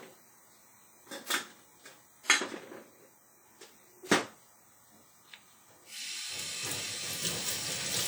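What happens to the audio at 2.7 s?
At 2.7 s the sound carries the transcoding between lossy codecs artefacts that run through the whole clip, not a fault local to that moment. The texture points to a WMA encode at around 48 kbit/s later re-encoded to HE-AAC at a similar rate, which is the likely cause. The second encoder spends bits on the first one's artefacts and adds its own, so two kinds of artefact are heard together. Nothing is present above 20.3 kHz.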